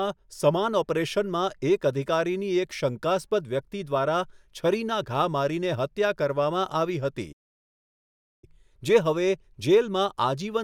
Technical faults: playback stall

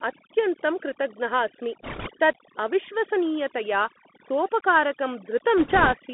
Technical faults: overdone noise removal; Bluetooth CVSD headset codec; bit errors on a Bluetooth voice link

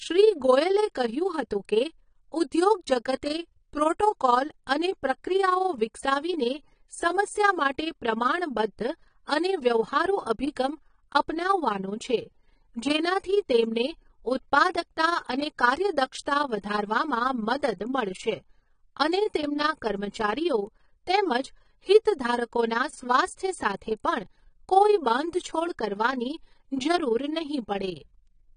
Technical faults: overlap-add ripple; AAC compression

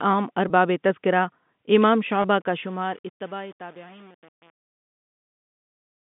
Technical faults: packet loss with pitch repetition; truncation distortion on a fade

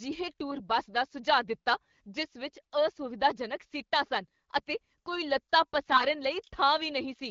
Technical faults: AMR bit errors

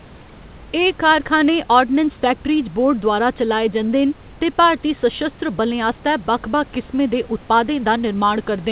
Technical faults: none

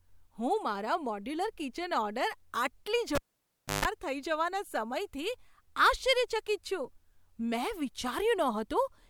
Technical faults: cable pulled and plugged in

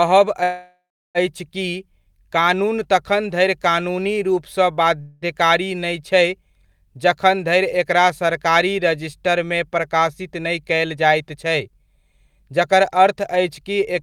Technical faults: call audio freeze; jitter buffer speed-up

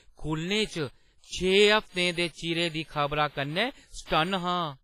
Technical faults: WMA compression

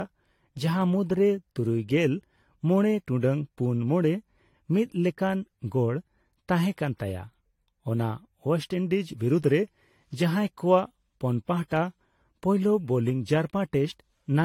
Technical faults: generation loss

